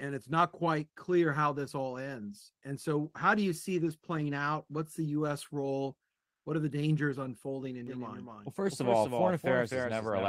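A speech clip with two faults. From 6.13 to 6.43 s, a 300 ms pause has its real background, sitting about 61 dB below the loudest speech, replaced by comfort noise that shifts the level by only about 1 dB. Unlike a noise gate or dropout, the gap isn't silent: it holds a steady, featureless hiss, likely Opus discontinuous transmission. From 7.87 s to the end, a doubled audio track runs a few dB under the original and roughly a third of a second behind, likely a second capture path. Unlike room echo, the copy is full-band, with no decay or reverberant colour, and it begins abruptly.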